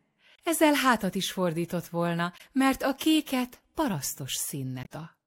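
A speech recording with two short bursts of damaged data in a compressed stream, at 2.34 to 2.41 s and 4.82 to 4.87 s, where corrupted frames make the decoder lose sync and search for the next frame header.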